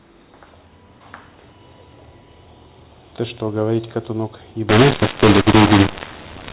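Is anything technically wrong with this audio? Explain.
Yes, there's one fault. From 4.69 s to the end at 6.53 s, you get mu-law and A-law mixed up: the telephone audio was coded with mu-law but decoded as A-law. The mismatched curves scramble the levels, so the speech turns harsh and distorted, and the quiet gaps fill with noise instead of staying silent.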